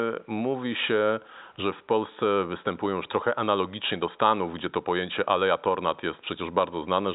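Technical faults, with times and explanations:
No technical faults are audible.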